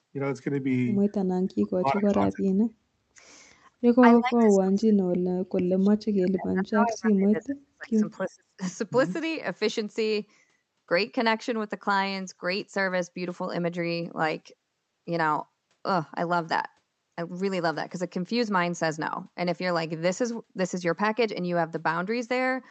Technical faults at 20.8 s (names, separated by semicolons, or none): none